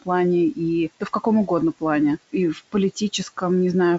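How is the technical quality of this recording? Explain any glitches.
One glitch stands out, with room noise sitting about 22 dB under the speech and a wideband telephone character that stays clear into the upper range.

From 2.54 to 2.74 s, just after "каком угодно плане и", the noise suppressor cuts into the speech, briefly treating it as noise. Level drops by up to about 14 dB, with roughly a tenth of a second audibly swallowed. Unlike a transmission dropout, the sound never goes silent or clicks. The speech fades down together with the background.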